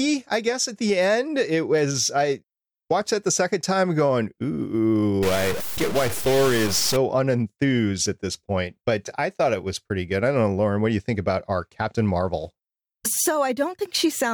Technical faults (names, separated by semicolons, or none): stuck bit